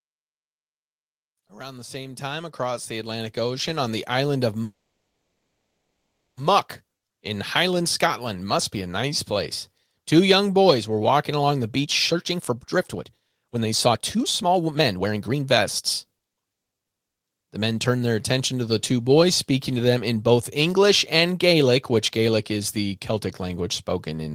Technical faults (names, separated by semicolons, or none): automatic gain rising; call audio freeze; jitter buffer speed-up; jitter buffer slow-down